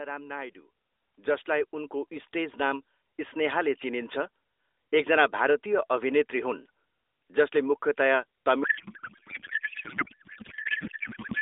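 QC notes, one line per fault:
8.64–11.41 s, codec payload misread: speech collapses into garbled warble and noise barely tracking it, as octet-aligned AMR frames are decoded as bandwidth-efficient, shifting every field.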